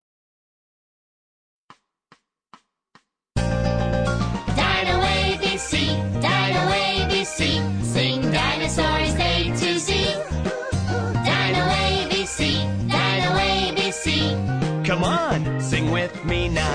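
No technical faults can be heard anywhere in this audio.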